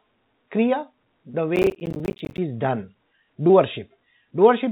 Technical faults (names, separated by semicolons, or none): short concealed packet loss; processor overload crackle